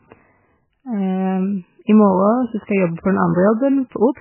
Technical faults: MP3 compression

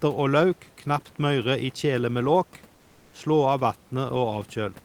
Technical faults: none

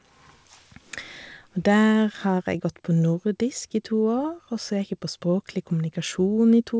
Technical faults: none

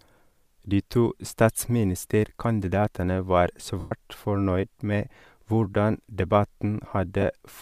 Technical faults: lost LE Audio frames

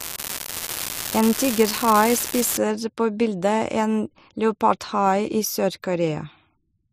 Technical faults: unreliable data bit

